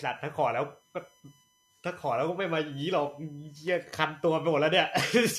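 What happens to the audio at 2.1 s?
USB whine runs through the whole clip, including 2.1 s. It is a steady 1 kHz tone with its strongest component at 3 kHz. USB bus current leaking into the audio through power or ground produces it. It sits about 40 dB below the speech.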